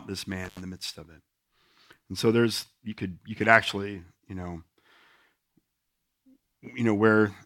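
Intermittent contact occurs between about 0.45 and 0.61 s, where a loose plug or cable connection briefly breaks the signal path. The speech drops out for roughly 78 ms inside that span. Crackle marks the moments the contact separates and then scrapes back together. During the break a faint hiss remains, the residue of the open line rather than any part of the speech itself.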